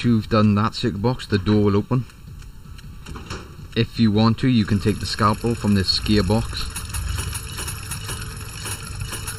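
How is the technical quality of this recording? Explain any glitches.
The recording has one clear problem running the whole way through: channel delay (comb filtering). One channel trails the other by roughly 0.7 ms, and once the two are folded to mono, shared content cancels at evenly spaced frequencies starting near 700 Hz, leaving the sound hollow and phasey.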